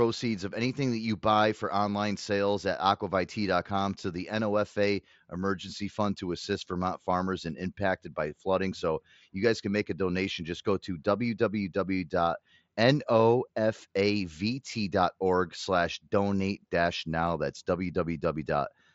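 No technical faults are audible.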